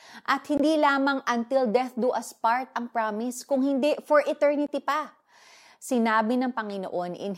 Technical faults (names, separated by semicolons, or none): block of digital silence